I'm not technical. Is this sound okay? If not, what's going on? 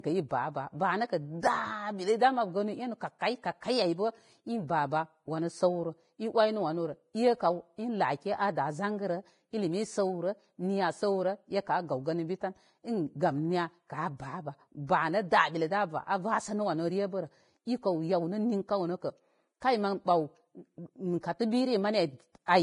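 No, the speech has two problems. The main one is heavy Vorbis compression, likely from squeezing the file very small. Everything above 10.6 kHz is simply gone, so it sounds dull, while the remaining treble turns hissy and grainy instead of crisp.

There's also pre-echo, a short hiss just before sharp sounds, at 1.40 to 1.43 s, 3.19 to 3.21 s and 19.60 s. The compressor spreads its noise across a short chunk of audio, so it leaks up to 27 ms ahead of each attack and softens it.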